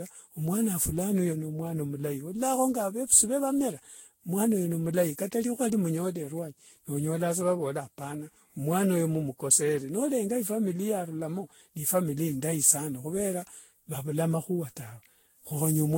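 Throughout, the speech sounds swirly, hollow and smeared, with soft attacks and nothing above 16.6 kHz. This is likely generation loss from about ten lossy re-encodes.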